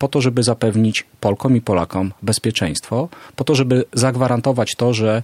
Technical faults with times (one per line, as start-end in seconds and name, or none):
none